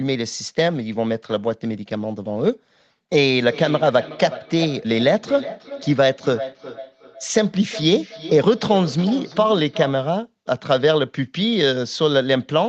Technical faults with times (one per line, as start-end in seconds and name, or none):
3.21-10.04 feedback echo between two devices